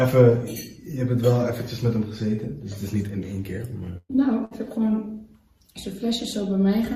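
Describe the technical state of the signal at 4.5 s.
A burst of packet loss runs from 4.45 to 4.54 s. The receiver stretched the last sound for about 58 ms, fading it out, then resumed with about 60 ms missing. On a spectrogram, frozen, dimming bands meet an abrupt content jump.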